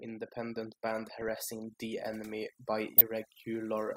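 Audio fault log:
Throughout: overdone noise removal. The noise reduction is set far too aggressively. Any frequency band that sits near the estimated noise floor is pulled down hard or muted outright. The quieter parts of the voice fall below that threshold and are removed along with the noise. What remains is a lowered background scattered with twinkling specks, where isolated bands briefly survive.
1.22 to 1.32 s and 2.98 to 3.01 s: DAB burbling. Uncorrected bit errors from weak reception reach the MP2 audio data, at a rate of around a fifth of a percent in the first burst and somewhat less in the second. Corrupted samples put short blips of noise into individual sub-bands, and corrupted scale factors make sub-bands jump in level for up to a frame. The first burst spans several frames and the second a few. The result is burbling laid over the speech.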